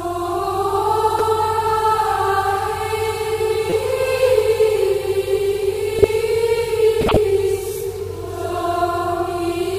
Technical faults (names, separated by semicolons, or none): repeated buffer; corrupt frame decoded